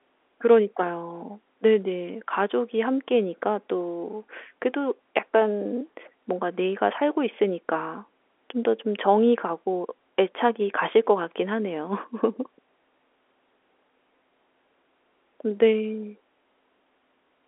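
Speech with no technical fault to report. It comes over G.711 telephone coding, so the sound sits in the narrow line band of roughly 300 Hz to 3.5 kHz, with nothing above about 3.7 kHz.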